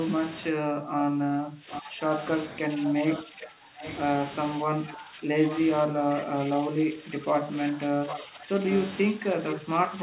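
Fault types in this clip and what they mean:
Speech suppressed in double talk: Likely an echo canceller that could not separate the local talker from loudspeaker echo while both sides spoke, so it turned the speech down. Level dips by as much as about 20 dB from 0.51 to 3.82 s, 4.64 to 5.31 s, and again from 5.87 s onward.
Echo leak: A loudspeaker end's echo canceller likely let part of its microphone pickup through, sending the voice back. A quieter copy trails the original by 794 ms, about 10 to 15 dB down, at 1.71 to 3.19 s, 3.80 to 3.94 s, 5.12 to 5.60 s, 8.08 to 8.19 s and 8.75 to 8.86 s.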